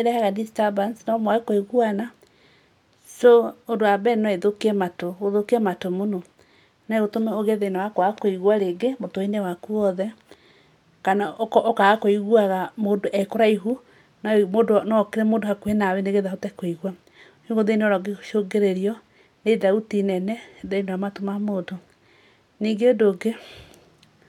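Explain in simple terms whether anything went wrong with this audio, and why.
Nothing went wrong with this audio, since no fault can be heard anywhere in the recording.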